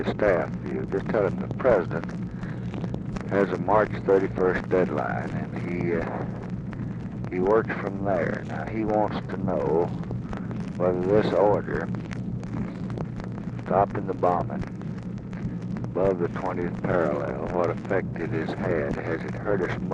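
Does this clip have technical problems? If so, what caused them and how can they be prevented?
Yes. Throughout, the sound is dull and gurgling, likely MP2 compression at a low rate around 80 kbps starving upper sub-bands. Unlike later errors, this is constant. A higher bitrate prevents it.

At 15.19 s, a brief burst of noise is DAB burbling: reception bit errors in the MP2 data putting short blips of noise into sub-bands, unlike the steady compression dullness. Stronger reception or better antenna placement prevents it.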